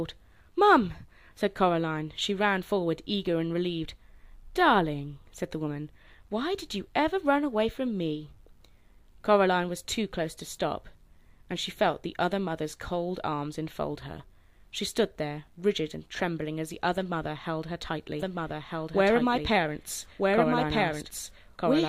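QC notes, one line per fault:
18.19 s to end, doubled audio track: a roughly equal-level full-band copy trails about 1.5 s behind, likely a second capture or out-of-step edit; it starts abruptly with no decay, unlike echo.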